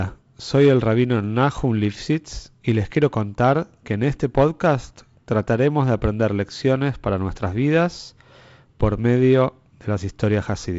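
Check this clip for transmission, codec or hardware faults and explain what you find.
Nothing faulty found: the speech shows the band limit near 7.7 kHz and light upper-band hiss of G.722 wideband telephone coding, with lower-band grain that fits 48 kbit/s operation.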